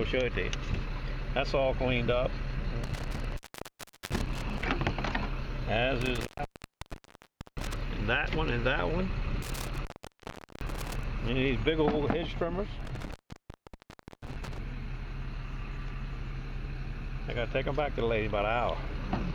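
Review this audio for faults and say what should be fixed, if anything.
Intermittent contact cuts the sound out four times: 2.84 to 4.64 s, 6.01 to 7.81 s, 9.42 to 11.04 s and 12.80 to 14.58 s. A loose plug or cable breaks the signal for 0.74 s, 1.31 s, 0.76 s and 1.15 s. Crackle marks each break. Reseat or replace the suspect cable and connectors before recording again.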